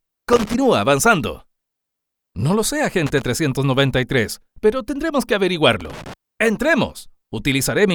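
Three short bursts of irregular crackle and scratching break into the audio, from 0.33 to 0.54 s, from 3.06 to 3.22 s, and from 5.81 to 6.14 s. Each lasts between about 0.15 and 0.33 s. This is loose connector crackle: a worn or dirty contact in the signal path keeps making and breaking as it shifts, chopping the signal into rough fragments. Any DC sitting on the line adds pops.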